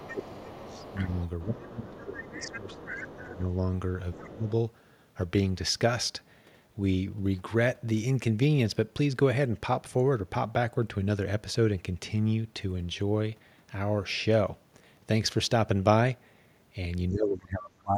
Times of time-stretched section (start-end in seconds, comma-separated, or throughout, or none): none